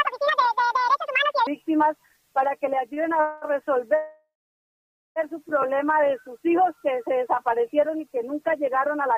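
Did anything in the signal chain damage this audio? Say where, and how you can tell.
Yes. From 0.0 to 1.47 s the audio runs at 1.91 times its proper speed, so it is both hurried and raised by roughly ten semitones, and at 1.47 s it drops back to normal rate and pitch. Because speed and pitch move together, this is a section at the wrong speed rather than a pitch-shift effect. It most likely arose at the playback or editing stage, where that stretch was clocked against the wrong sample rate.

At 2.94 to 3.00 s there is a short stall from a late packet. The sound at that point is held for about 28 ms, then resumes exactly where it left off, with nothing skipped. This is a network-stage fault: one packet arrived late, the jitter buffer briefly ran dry, and the receiver extended the last frame to cover the wait, adding 28 ms of delay.

Two call audio freezes follow, likely caused by network delay draining the jitter buffer. 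From 3.21 to 3.45 s the last sound is stretched into about 213 ms of fading fill with no full silence. From 3.96 to 5.19 s a longer hold fades out, leaving about 870 ms of silence within a 1.2 s gap. Both times the audio resumes from the same point, so time is inserted rather than lost.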